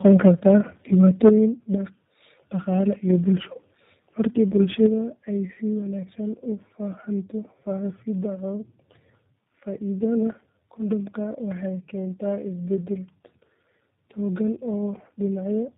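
Throughout the recording, the speech shows tandem speech coding. The call was decoded and re-encoded at each network border, so every coder worked on the already damaged output of the one before. The roughness builds in a way that fits about three lossy speech coders in a row, ending in a low-rate coder near 8 kbit/s. The result is muffled, gritty, warbling speech with nothing above 3.8 kHz, thinner and rougher than any single coder would leave it.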